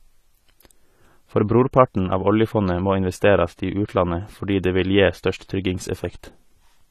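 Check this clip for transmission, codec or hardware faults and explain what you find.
There is one fault, and it runs through the whole speech clip. The sound is dull and smeared, with a fizzy, warbling edge on sibilants and held sounds, and nothing is left above 14.1 kHz. This is likely AAC compression: an AAC-LC encoder at a low rate, one that fits about 32 kbps, quantises each frame's spectrum coarsely against a hearing model. It lowers the cut-off and leaves gaps in the bands that remain, and the damage is plainly audible.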